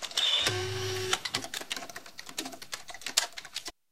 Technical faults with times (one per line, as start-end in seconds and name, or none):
1.55-1.76 loose connector crackle